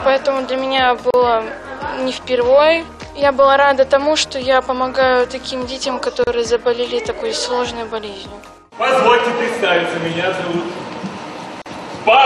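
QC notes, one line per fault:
1.11–1.14 s, 6.24–6.27 s, 11.62–11.66 s: gap at a join of encoded pieces. The sound drops to silence three times, for 35, 33 and 41 ms, with edges blurred by the codec, then carries on exactly where it stopped. Each gap marks a join between separately encoded pieces that were butted together untrimmed, so one piece's padded final frame and the next piece's encoder start-up delay both remain as dead air.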